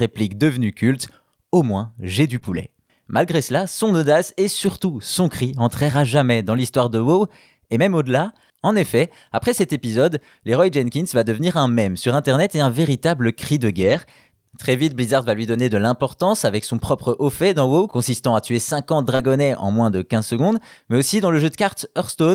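Around 2.35 s the speech goes rough and grainy for a moment. That's a lost packet rebuilt from error correction: the next packet carried a low-bitrate copy, so nothing drops out, but the patch sounds coarser and noisier. It comes back from 2.43 to 2.57 s and at 4.65 s. After "cri entrera jamais dans" it runs 6.53 to 6.59 s, after "un véritable cri de" 13.73 to 13.99 s, and at 15.53 s it falls between "va lui" and "de l'importance avec son". The last one is 19.19 to 19.25 s.

Wedged in at 2.39 to 2.43 s and again at 19.15 to 19.21 s is short concealed packet loss. Here audio simply arrived too late, so the decoder stretched the last sound forward and crossfaded back. You hear a brief smear or wobble rather than a gap.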